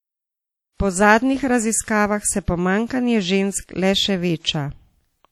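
Speech throughout carries plainly audible WMA compression damage: ringing, washy hiss pumping with the signal, likely from roughly 48 kbps encoding; a spectrogram shows smeared, patchy upper bands.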